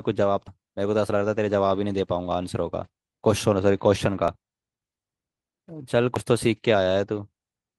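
Right at the start, around 0.47 to 0.49 s, there's a skip ahead. The speech jumps forward with no gap at all, and roughly 0.4 s of audio is simply gone. The two sides are butted straight together, so a chunk of a word or more vanishes. That points to a stretch being dropped in transit, or discarded by an overflowing jitter buffer while later audio was already queued.

Later there are two small jumps in the speech, at 4.28 s and 6.16 s. There's no silence, just a hard splice. The first loses something like a fiftieth of a second and the second about twice that. The likely cause is a dropped buffer (overrun): the software didn't read its samples in time, the hardware wrote over them, and playback carried on from the next block.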